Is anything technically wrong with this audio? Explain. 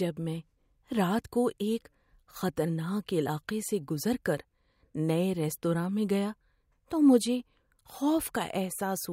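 No, nothing technically wrong turns up here; it's a short bit of speech and there's no fault to point to anywhere in it.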